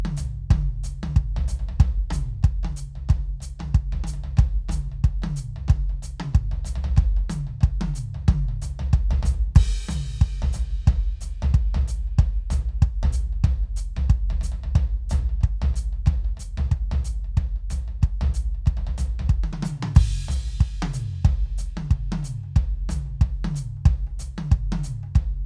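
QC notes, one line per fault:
No faults found in this music clip.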